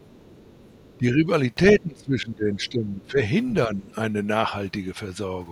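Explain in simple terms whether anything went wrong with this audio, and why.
Two echo-related problems show up in this speech, and they trade places through the clip.

First, the other side's voice leaking through. From the very start to about 0.98 s you can hear a faint second voice underneath, very quiet compared with the main talker. It returns as two tiny blips, around 2.65 to 2.70 s and 3.03 to 3.09 s. The likely cause is that the talker's device was playing the far end on a loudspeaker, the microphone picked it up, and the echo canceller didn't scrub all of it out.

Second, speech suppressed in double talk. At 0.98 to 1.29 s, 1.78 to 3.17 s and 3.67 to 3.94 s the main voice sinks noticeably. The middle stretch is the worst: the voice drops a long way for about a second in total. This likely happened because both sides were talking at once, so the echo canceller couldn't tell the real talker from the loudspeaker echo and turned everything down to be safe.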